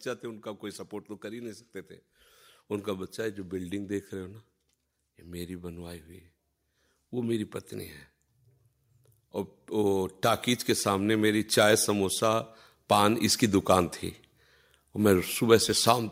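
An automatic gain rise runs from about 9.68 to 13.97 s. The automatic gain control judged the incoming signal too quiet and steadily pushed its gain up, by about 6 dB over those four-odd seconds. Because the boost is applied to everything reaching the microphone, the speech and the background noise swell together, so the room tone climbs in step with the voice rather than the talker simply sounding closer.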